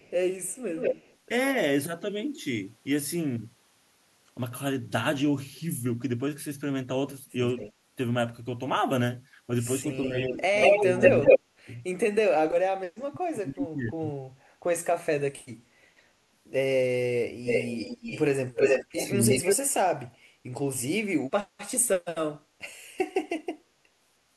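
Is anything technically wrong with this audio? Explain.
Yes. The clip has two related faults from a speakerphone-style echo path.

Echo leak appears at 0.0–1.16 s, 7.48–7.73 s, 9.88–11.39 s and 17.44–19.56 s. A delayed copy of the speech trails the original by roughly 180–200 ms in the first three spots and about 320 ms in the last. Its level varies: faint at 7.5 s, close to the direct speech at the start and at 17–19 s, and louder than it around 10–11 s. The likely cause is an echo canceller failing to remove loudspeaker pickup.

Speech suppressed in double talk occurs at 9.81–14.04 s and again at 18.94–19.46 s, overlapping the echo stretches. The talker's level repeatedly dips, by around 35 dB at its deepest in the first span, totalling about two seconds of attenuation. The second span is briefer, about 0.2 s, and milder, around 10 dB. This is likely the canceller mistaking simultaneous talk for echo and ducking both.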